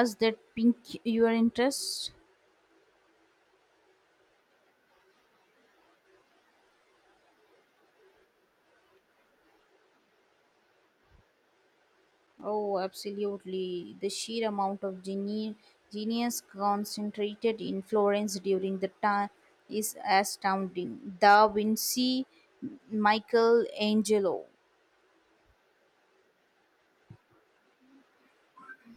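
A speech recording with a burst of loose connector crackle from 11.92 to 12.43 s: a worn or dirty contact rapidly breaking and remaking the signal path, chopping the audio into irregular scratchy bursts. On a waveform this shows as ragged gaps and sharp spikes; a spectrogram shows scattered broadband vertical streaks.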